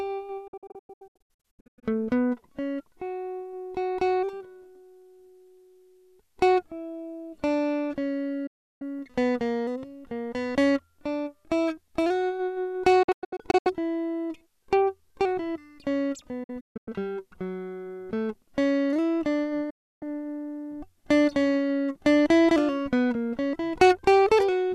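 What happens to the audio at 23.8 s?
At 23.8 s the music plays through intact, with no fault at that moment.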